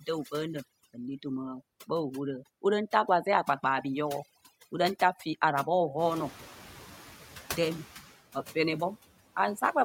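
Throughout, the background is pulled down and twinkles with specks: overdone noise removal, where an over-strong reducer pulls down every band near its noise estimate, taking quiet parts of speech too.

From 5.98 to 6.93 s, the room noise jumps by about 18 dB around 6 s, settling about 20 dB below the speech. It comes through clearly at first, then sinks by about 6 dB over 0.95 s. This is the noise suppressor catching up, its noise estimate lagging the sudden rise.

Between 8.32 and 8.56 s, part of the speech sounds swallowed, dipping by up to about 11 dB for roughly a tenth of a second. This is speech cut by the noise suppressor, which mistook it for background noise.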